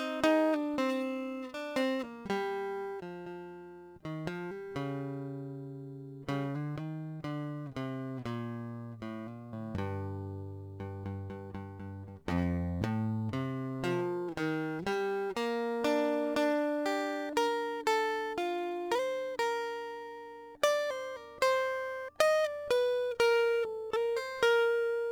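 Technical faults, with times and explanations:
Throughout, crude rate conversion. Repeated samples, probably 44.1 kHz to 48 kHz, leave a gritty inharmonic fizz around 30 dB below the music, trailing its louder, brighter passages.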